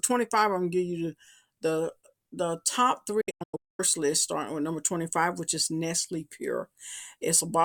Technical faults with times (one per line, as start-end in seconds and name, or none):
3.21-3.80 digital broadcast dropout